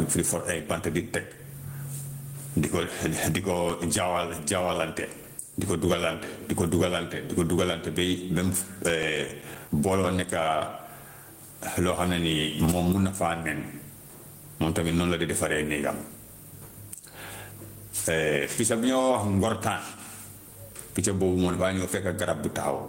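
Gain pumping runs through the whole recording, with the level swinging by roughly 20 dB. The likely cause is input gain set far too high for the microphone, with a fast limiter or compressor clamping down on every peak. Loud and quiet passages end up pressed close together, so the speech sounds flattened.

CD scratch ticks appear from 2.65 to 4.09 s, ending just before "jaawalante di ko duggalante". About a dozen sharp clicks repeat at a steady rate of roughly eight per second, each lasting only a few milliseconds. The regular spacing tracks the disc's rotation: once per revolution a blemish wipes out more data than error correction can rebuild, and the player patches over the gap by interpolating or muting samples.

A second run of CD scratch ticks falls between 8.77 and 9.81 s, just before "booloo nekka". There are nine ticks at a similar rate, and the longest is a slightly broader dropout of several milliseconds.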